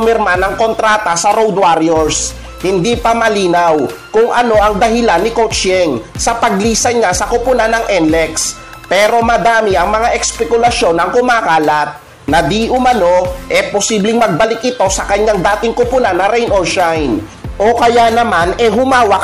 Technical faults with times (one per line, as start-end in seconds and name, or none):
none